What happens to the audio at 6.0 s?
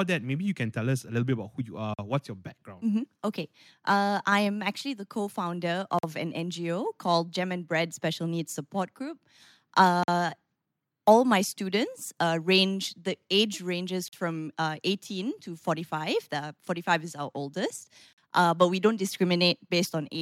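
A gap between chunks opens from 5.99 to 6.03 s. The speech stops for about 48 ms at a join between 4-second chunks, leaving a hard-edged hole.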